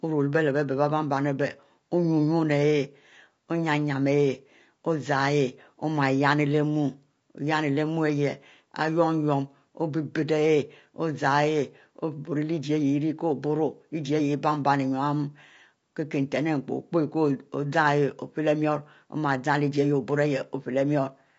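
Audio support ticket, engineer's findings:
Speech path through a likely low-delay AAC compression stage (AAC-ELD), throughout. Short frames resolve pitch harmonics poorly and starve the bit budget, consistent with roughly 32 kbps. Symptom: plainly audible rough, grainy voice, noise filling gaps between harmonics.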